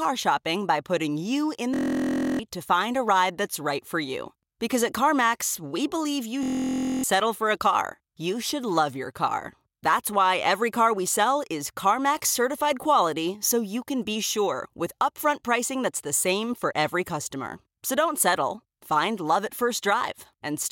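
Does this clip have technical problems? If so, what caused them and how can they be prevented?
Yes. Two system hang loops hit this speech: 1.74–2.39 s, after "by putting you in" and before "to find a ride", and 6.43–7.04 s, after "we believe you" and before "settle for". Each time the driver stalled and the hardware kept replaying one 23.22 ms chunk, 28 and then 26 times, so you get a buzz at about 43.1 Hz, which fits a 1024-sample buffer. Roughly 0.7 s of audio is lost each time. To prevent it, run capture on a high-priority thread with a stable driver.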